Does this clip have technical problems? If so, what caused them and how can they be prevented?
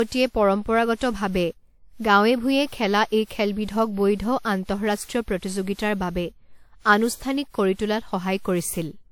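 Yes, there's generation loss throughout the speech: it's swirly, smeared and hollow, with blurred attacks and nothing above about 18.9 kHz. The likely cause is repeated lossy encoding, roughly seven passes of something like 96 kbit/s WMA, each re-quantising on a shifted frame grid so the damage piles up. To prevent it, keep a lossless master and encode to a lossy format only once, at the end.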